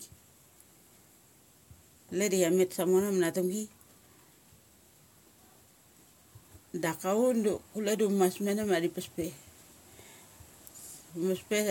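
Nothing technically wrong turns up anywhere in this speech recording, so there's honestly nothing to flag here.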